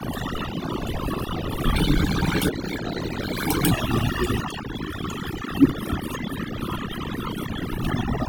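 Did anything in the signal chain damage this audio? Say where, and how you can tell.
Yes. Overdone noise removal runs through the whole clip, a processing-stage fault: a denoiser set too hard is pulling individual frequency bands down whenever they sit near its noise estimate. The background collapses to near silence with twinkling specks, and quieter components of the speech are gated out along with the noise.

From 1.75 s to 3.72 s there is a section at the wrong speed. Playback runs 1.24 times fast, so the speech turns hurried and its pitch rises by about four semitones, then snaps back to normal at 3.72 s. Speed and pitch shifting together points to the segment being played or resampled against the wrong clock, likely during editing or playback rather than at the converter.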